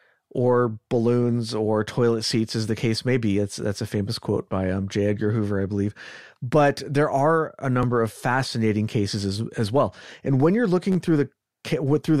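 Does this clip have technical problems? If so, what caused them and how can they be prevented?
Yes. A click at 7.83 s after "there are a" and a brief buzz from 10.92 to 10.96 s after "when you're" are repeated buffer faults: audio arrived late, so the last 10.7 ms piece (fitting a 512-sample buffer) replayed once, then three times. A larger buffer or higher audio-thread priority prevents this.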